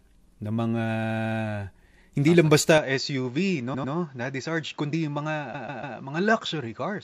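Repeated frames first appear at 1.02 s and run to 1.38 s. A block of about 72 ms, consistent with three compressed frames, was written out again and played five extra times. That adds 360 ms and makes a rapid stutter.

An input switched to a poorer device follows at 2.78 s and lasts to the end. With no gap at the switch, the sound turns dull and narrower: nothing is heard above 7.6 kHz, the level drops a few decibels, and a new background noise sits far below the signal. The likely cause is the recording moving to another microphone or a headset's call profile.

Repeated frames return twice. From 3.73 to 3.93 s, a 96 ms block plays twice more, adding 192 ms. From 5.53 to 5.97 s, a 144 ms block repeats three extra times, adding 432 ms. Both give the same stutter, slower than the first because the blocks are longer.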